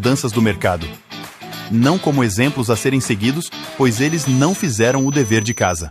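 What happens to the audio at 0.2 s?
Nothing goes wrong at 0.2 s: the audio is intact there, with no dropout, click, distortion or other fault at that moment.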